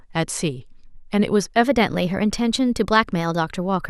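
Wrong sample rate from 1.64 s to the end: audio recorded at 44.1 kHz plays at 48 kHz, so speech runs 1.09 times fast and about 1.5 semitones high.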